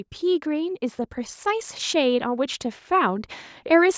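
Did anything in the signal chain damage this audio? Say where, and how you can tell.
Yes. Call processing's automatic gain rising judged the input too quiet and lifted it by about 6 dB from 1.43 to 3.95 s, swelling speech and background together.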